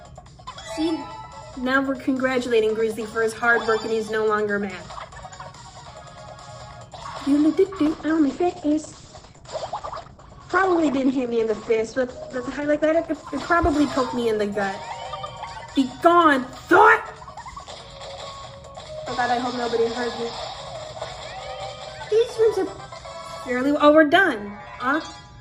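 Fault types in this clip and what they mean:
call bitrate drop: from 7.87 to 15.79 s the encoder runs on far fewer bits, which fits a fall from 96 to about 10 kbps. For nearly 5 s the sound turns coarse and watery, with the top end cut from 20 kHz to 8 kHz. Unlike packet loss, nothing drops out.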